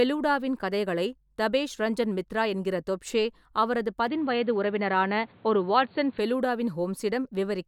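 Input switched to a poorer device, 4.07 to 6.19 s, right after "மித்ரா என்கிற தொப்ஷே அவரது": the speech turns dull and boxy, loses everything above 4.6 kHz and gains faint background noise, with no gap or level jump, likely as a narrower-band microphone or headset takes over.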